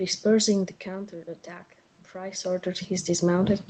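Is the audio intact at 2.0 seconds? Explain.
No. At 2.0 seconds the speech and the background noise are swelling up together, a slow climb that began at 0.83 s and continues to the end. This is automatic gain rising: after the input level dropped by about 13 dB, the gain control gradually raised its gain to compensate.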